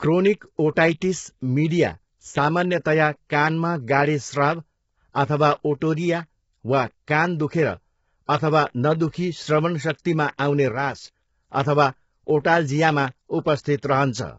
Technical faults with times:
0.00-14.38 low-delay AAC compression
2.31-2.37 one channel drops out
8.26-8.29 pre-echo
10.72-11.04 one channel drops out

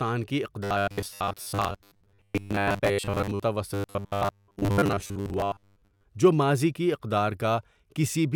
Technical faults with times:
0.64-3.44 robotic sound from repeated short buffers
3.74-6.04 robotic sound from repeated short buffers

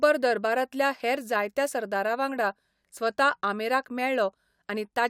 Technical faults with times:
0.00-5.09 block size mismatch (truncated)

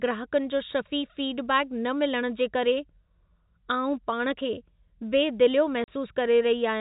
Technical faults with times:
5.84-5.88 packet loss filled with silence

